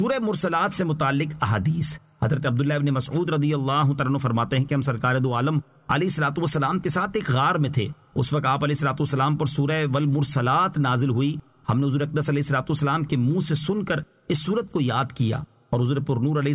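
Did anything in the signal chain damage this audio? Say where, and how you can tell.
No, nothing in the signal chain audibly damaged this audio. No stage leaves a mark at any point in the recording.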